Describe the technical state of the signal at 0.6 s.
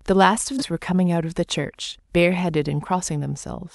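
Compressed frames skipped at 0.58 to 0.62 s: around fifteen whole frames, each 46.4 ms long, were dropped or rejected as damaged. Playback jumps ahead by roughly 0.7 s of speech.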